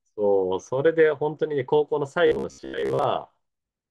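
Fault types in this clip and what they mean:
Robotic sound from repeated short buffers: from 2.27 to 3.04 s the speech turns into a rigid metallic buzz near 66.7 Hz, likely from a roughly 15 ms chunk being replayed while fresh audio arrives too slowly, so most of the real signal is skipped.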